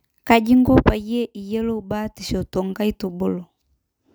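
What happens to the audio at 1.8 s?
Nothing goes wrong at 1.8 s; the speech there plays through intact, with no dropout, click or distortion.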